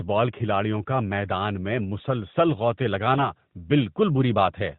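From 3.14 to 3.30 s, just after "میدان میں مسلسل غوطے", AMR bit errors corrupt roughly five 20 ms frames at a few percent of bits, scattering the excitation pulses so the speech turns briefly hoarse and gargly. The spectrogram shows smeared, noisy harmonics under the AMR-NB 4 kHz ceiling.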